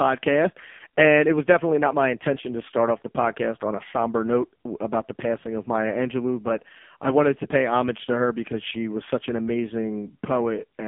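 Speech heard throughout through the AMR narrowband mobile codec, the AMR-NB speech codec of 2G and 3G phone calls. The voice is squeezed into a telephone band of roughly 200 Hz to 3.4 kHz, so it sounds thin and boxy, and heavy coding damage makes it buzzy and synthetic, which fits the low 5.15 kbps mode. On a spectrogram the energy stops at a hard ceiling near 3.5 kHz with nothing above it, and the region below 200 Hz is bare.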